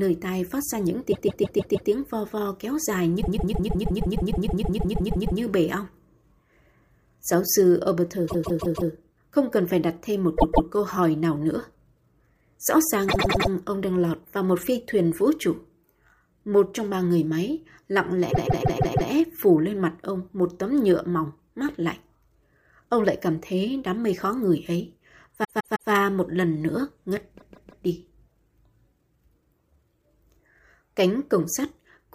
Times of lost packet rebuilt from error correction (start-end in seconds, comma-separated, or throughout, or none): none